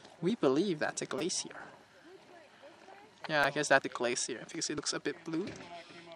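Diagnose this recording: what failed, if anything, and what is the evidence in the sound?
Dropped buffer (overrun) at 0.30 s and 3.84 s, at the driver/buffer stage. Each point has an abrupt jump in the sound and no gap of silence. The audio skips ahead by about 20 ms at 0.30 s and about 40 ms at 3.84 s. The likely cause is that the capture software did not read its buffer before the hardware overwrote it, so that stretch was discarded and the surrounding audio was joined end to end.

Repeated buffer from 1.19 to 1.21 s and at 3.44 s, also at the driver/buffer stage. A 5 ms piece of sound replays back to back with a hard join at each repeat. It is heard as a click or brief buzz, roughly four repeats in the first event and two in the second. New samples did not arrive in time for playback, so the device looped the last short buffer. This fits a 5 ms buffer size and displaces about 20 ms and 10 ms of audio.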